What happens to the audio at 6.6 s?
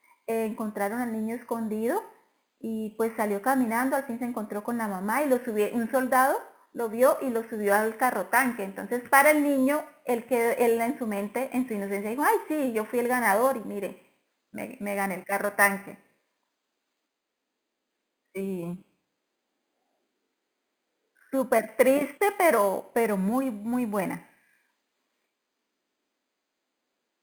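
At 6.6 s, as throughout, imaging from sample-and-hold upsampling (11 kHz to 48 kHz, samples repeated unsmoothed) mirrors the speech into 5.5–11 kHz, about 18 dB down: a metallic fizz that tracks speech level and moves against pitch, unlike steady hiss.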